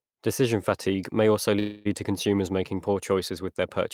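At 1.59 s the speech stalls in a call audio freeze lasting until 1.87 s: the last sound is stretched into a fading buzz for about 260 ms, then speech resumes intact but late, likely because delayed packets drained the jitter buffer.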